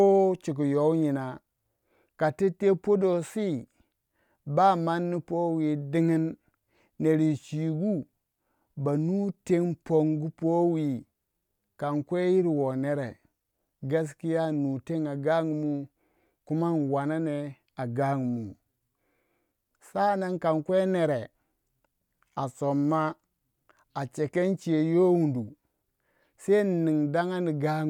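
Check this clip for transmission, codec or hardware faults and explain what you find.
No faults can be heard anywhere in this recording.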